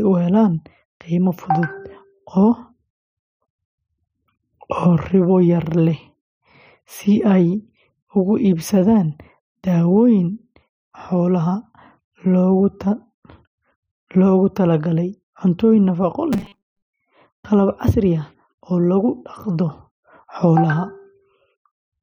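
From 16.33 to 16.87 s the speech goes robotic, with a rigid metallic buzz at 200 Hz that loosely tracks the words. It's likely repeated short buffers: most of the audio there is 5 ms chunks looped while real audio is skipped.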